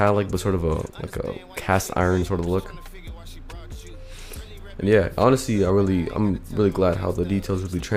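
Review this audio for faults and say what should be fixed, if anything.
No faults found; nothing needs fixing.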